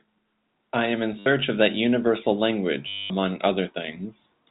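It's a speech clip with packet loss where the last packet gets repeated, heard twice: a brief stutter from 1.19 to 1.26 s, then a longer, robotic stretch from 2.88 to 3.1 s. The receiver keeps replaying the previous chunk until fresh audio arrives, so the longer run buzzes. That buzz points to packets of about 10 ms, so around 100 Hz. Underneath, the telephone-band G.711 sound is audible.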